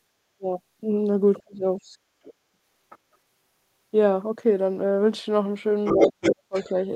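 At 0.37 to 0.46 s the talker's speech drops by roughly 30 dB. The likely cause is speech suppressed in double talk: with both sides talking, the echo canceller treated the talker as echo and turned the microphone down. On a waveform the envelope collapses to a thin sliver, and on a spectrogram the harmonics and upper bands fade briefly. The same effect, likely from the same clash, returns between 1.43 and 1.81 s. About 200 ms of that stretch is pulled down by up to roughly 35 dB.

From 1.92 to 2.02 s the room sound itself sinks by about 16 dB and then comes back. This is background gated by the echo canceller: it clamped the microphone while the loudspeaker was playing. A spectrogram shows a short vertical gap in the noise floor across all frequencies, and the waveform shows a step down in the low-level hiss.

At 2.23 to 2.34 s a faint second voice, roughly 25 dB below the talker, slips through. 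It is likely the other side's voice leaking through from the loudspeaker because the canceller missed part of it. It appears on a spectrogram as weak, misaligned harmonic traces under the main speech. Between 2.52 and 2.58 s the talker dips sharply again, by roughly 35 dB over about 70 ms, likely another double-talk suppression, seen as a brief notch in the envelope. A second faint leak at 2.90 to 2.98 s, likely from the far end, sits roughly 25 dB under the talker.

The heaviest stretch starts at 5.85 s. The other side's voice comes through at about the same level as the talker until 6.71 s, so two competing sets of harmonics cross on the spectrogram, and the far end likely leaked almost unchecked. Overlapping it, from 5.96 to 6.69 s, the talker is cut by up to roughly 40 dB across about 400 ms in total, likely double-talk suppression. The talker's speech is pulled down under the intruding voice.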